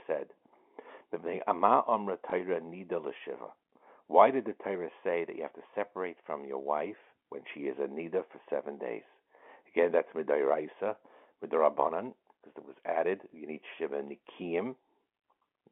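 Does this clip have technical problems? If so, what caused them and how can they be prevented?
Yes. At 2.3 s and 13.3 s the speech gives a brief small blip. This is packet loss with the last packet repeated: one 20 ms packet went missing, and the receiver replayed the previous one. A jitter buffer with proper packet loss concealment, plus a network path with less loss, prevents it.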